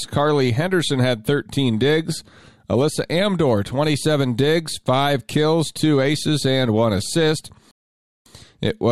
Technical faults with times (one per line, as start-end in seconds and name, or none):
7.71-8.26 rebuffering stall